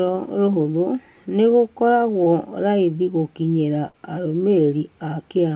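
A short concealed packet loss occurs at 2.24 to 2.28 s, just before "raithi gũkinyĩra". About 20 ms of the call failed to reach the decoder in time, and the receiver covered the hole by carrying the preceding sound forward for roughly that span before blending back into the real signal. It comes across as a brief smear or wobble, sitting against the narrow telephone band of the call path, where nothing reaches above 4 kHz, as G.711 A-law coding would give.

A burst of packet loss follows at 3.88 to 3.96 s, right after "raithi gũkinyĩra". Here about 60 ms went missing in one run. The receiver extended the last sound and let it decay as the gap lengthened, so a voiced stretch turns into a short held buzz and unvoiced material into a fading hiss. When the audio resumes, the sound that should have filled those 60 ms is simply gone, leaving a small jump forward.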